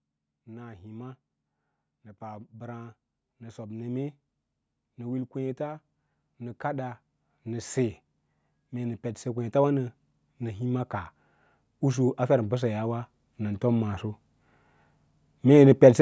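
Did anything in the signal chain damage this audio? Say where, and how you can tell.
Yes. The call processing stage applied automatic gain rising twice, from 1.94 to 4.17 s and from 11.67 to 14.05 s. Speech and background swell together by about 4 dB over roughly two seconds each time. The gain control judged the input too quiet and ramped itself up.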